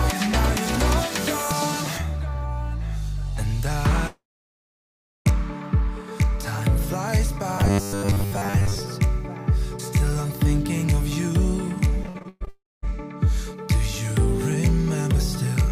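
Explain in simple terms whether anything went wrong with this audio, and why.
From 4.07 to 5.27 s the sound trails off into silence for over a second, then resumes with that stretch missing, likely a long network dropout. It happens again from 12.49 to 12.84 s, losing about a third of a second.

Between 7.58 and 8.80 s the audio turns into a stiff, metallic 100 Hz buzz. This is likely robotic sound from repeated short buffers, with one 10 ms piece looping while most of the real audio is skipped.

From 12.03 to 12.49 s the sound is choppy and robotic. This is repeated packet loss: several short gaps, the longest 121 ms, are each patched with a copy of the last sound.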